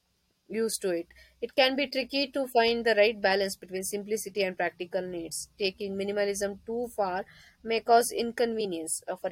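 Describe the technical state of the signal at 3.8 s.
Right after "find the right balance", from 3.75 to 3.81 s, compressed frames get skipped: about 20 ms of audio is missing, so the speech jumps ahead at the join before "simplicity and".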